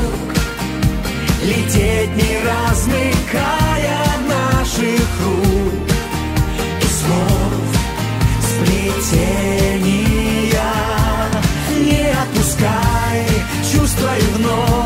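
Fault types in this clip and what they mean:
Sample clock jitter: the converter's timing wobbles by roughly 5 microseconds. Each sample lands slightly off, adding a grainy hiss about 25 dB below the sound, strongest on loud, bright passages.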